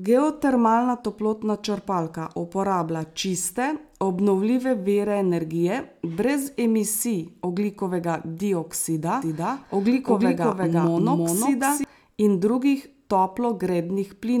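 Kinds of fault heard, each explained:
Doubled audio track: A second full-band copy of the speech runs about 0.4 s behind, at roughly equal level, with no decay or room colour. It starts abruptly after "ogljikovega dioksida" and cuts off before "in drugih", likely from a slower capture path.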